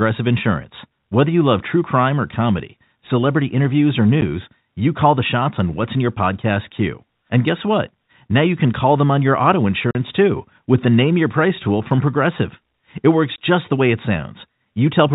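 Packet loss filled with silence occurs at 4.21 s, 9.91–9.95 s and 13.36–13.38 s. Packets went missing and the receiver played silence in their place. This left holes of 10, 40 and 20 ms, which points to 10 ms packets. Each gap chops the speech abruptly, with hard edges.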